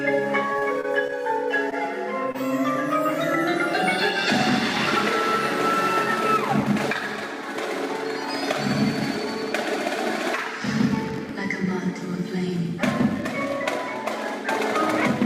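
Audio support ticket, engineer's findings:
Repeated packet loss (robotic sound), 0.53–1.14 s. Choppy stretch from a run of short holes (longest 29 ms), about 109 ms patched, 18% of span. Jitter buffer/concealment repeatedly extending prior audio. Unlike a single dropout: clustered, sustained roughness.

Short concealed packet loss, 2.32–2.36 s. Brief smear/wobble, 25 ms filled by concealment continuing the preceding sound, then blended back. Single isolated event, no follow-on gaps, so no robotic texture like the earlier burst.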